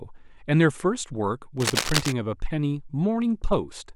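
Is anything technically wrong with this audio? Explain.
Yes. From 1.57 to 2.13 s, dense, uneven scratching and rustling sits over the speech, only a few decibels below it. This is cable scratch noise, likely from a worn cable or connector being moved so its contact resistance fluctuated rapidly, injecting those ragged noise bursts.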